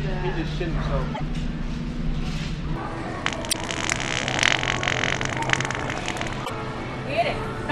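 At 1.11 to 1.21 s, 3.49 to 3.55 s and 6.42 to 6.50 s, damaged data in the compressed stream makes the decoder misread frames and hunt for sync, giving brief glitches. Each shows an abrupt waveform discontinuity.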